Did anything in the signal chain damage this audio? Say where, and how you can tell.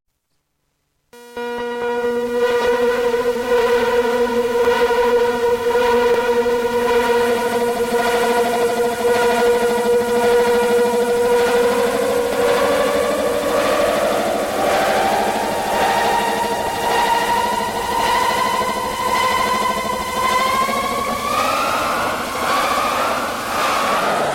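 Yes. Between 2.61 and 2.68 s, 21.04 and 21.11 s, and 23.98 and 24.07 s, frames play out of order: two adjacent runs of 30 ms, 30 ms and 40 ms are swapped, as a network or jitter buffer delivering packets out of sequence would do. Each stretch is a garbled flutter, seen as three vertical discontinuities.

Separate single sharp clicks at 4.65, 6.14, 12.33, 15.36, 16.67 and 19.49 s come from dropped samples, with less than a millisecond missing at each. The likely cause is the driver or buffer stage skipping samples. The waveform jumps abruptly, and the spectrogram shows a thin full-height line.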